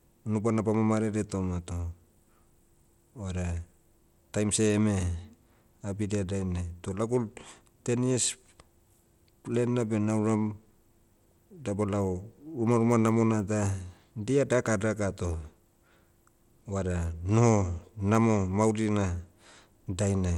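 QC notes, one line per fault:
throughout: Bluetooth SBC compression, likely. Nothing sounds above 17.2 kHz. Coarse sub-band quantisation leaves audible grit on the speech, which fits roughly 96 kbps.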